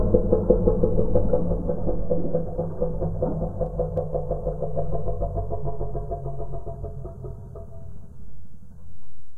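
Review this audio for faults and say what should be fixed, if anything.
No faults turn up in this audio, so there is nothing that should be fixed.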